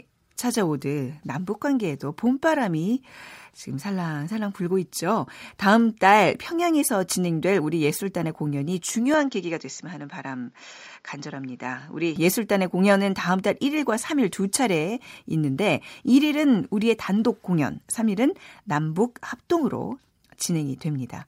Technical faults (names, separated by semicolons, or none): input switched to a poorer device